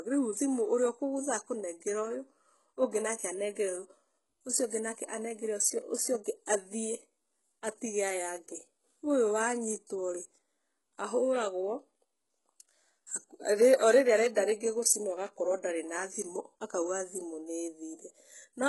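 Throughout, the treble sounds bright yet synthetic and stops near 11.5 kHz, with gritty, lispy s sounds, which is likely heavy HE-AAC compression at a very low bitrate around 12 kbps. Unlike a plain low-pass, the treble is rebuilt from lower bands rather than missing.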